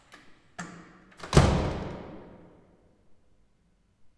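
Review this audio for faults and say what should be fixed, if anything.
Nothing needs fixing: the signal shows no audible technical faults anywhere in the recording.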